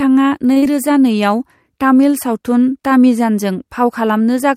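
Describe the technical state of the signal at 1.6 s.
At 1.6 s the speech signal is intact, with no technical fault present at that moment.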